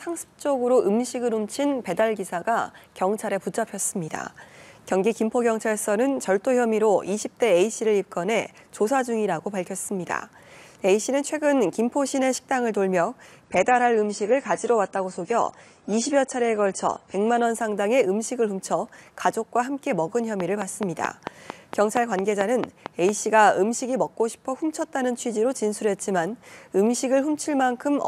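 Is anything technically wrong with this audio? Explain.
Yes, there are two faults.

From 13.44 to 17.44 s the adaptive stream switched to a lower bitrate, likely after the connection slowed, then recovered. The sound points to a fall from around 96 kbit/s to around 32 kbit/s AAC. With fewer bits to spend, the encoder discards the top band, and nothing remains above about 10.2 kHz. The treble turns dull, with coding artefacts. The drop and the recovery are abrupt, with no gap in the audio.

From 20.40 to 23.10 s there is a train of clicks, most likely from electrical interference or a faulty connection injecting pulses into the signal. About fifteen near-identical clicks arrive at a regular 4.47 per second and peak well above the program level, roughly 15 dB over it. They are heard as a steady ticking laid over the sound, and they keep going through any pauses.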